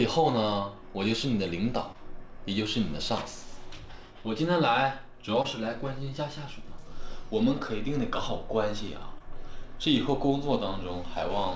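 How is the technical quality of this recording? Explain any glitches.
The recording has three brief glitches. It passed through a call path whose band stops at 8 kHz, which fits G.722 at 64 kbps.

At 1.92, 5.42 and 9.18 s there is short concealed packet loss. About 20 ms of audio never arrived in time. The receiver extended the preceding sound to fill the gap, then blended back into the real audio. Each gap is heard as a brief smear or wobble.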